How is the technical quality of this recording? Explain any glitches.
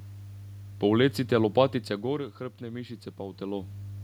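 Two technical faults stand out: a steady mains hum under the whole recording, and an automatic gain rise near the end.

Mains hum runs throughout at 50 Hz, roughly 15 dB below the speech. A ground loop or nearby transformer is leaking the power line into the signal path, so a constant low drone with some low harmonics sits beneath everything.

Automatic gain rising occurs from 2.59 to 3.84 s. The input fell by about 10 dB, and the gain control responded by gradually adding about 4 dB. Speech and room background swell together over that stretch, separate from the natural level shifts when the talker moves.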